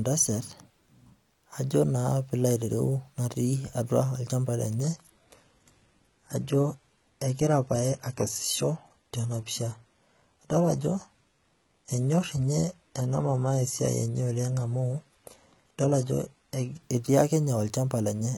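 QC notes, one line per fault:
4.83–16.83 s, adaptive stream at a lower bitrate: just before "etii ake" the speech abruptly loses its top end, with nothing above 11.8 kHz, and codec artefacts rise until full quality snaps back. A slowed connection pushed the stream onto a cheaper rendition, and the sound points to a drop from AAC-LC near 96 kbit/s to HE-AAC near 16 kbit/s. Unlike a dropout, there is no gap, only sudden quality steps at both edges.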